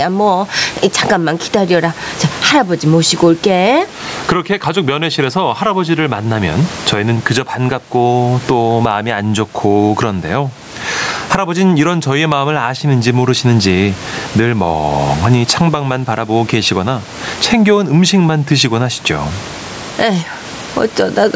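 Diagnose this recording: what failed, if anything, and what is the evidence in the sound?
Gain pumping throughout: the gain swings around 20 dB, ducking under loud speech. Likely cause: excessive mic gain driving a fast limiter in capture.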